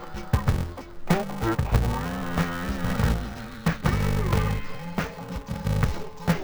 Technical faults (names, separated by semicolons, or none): interleaved audio read as planar